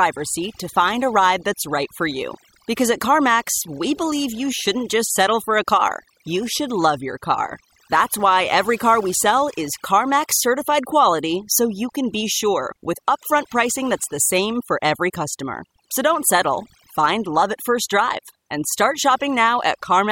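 A noise reduction stage set far too aggressively is at work across the whole of this speech recording. It is an overdone noise removal that clamps individual frequency bands down or shuts them off wherever their level sits close to what it has taken to be noise, and the softer components of the voice fall under that threshold too. Between phrases the background drops and breaks up into twinkling, chirpy fragments.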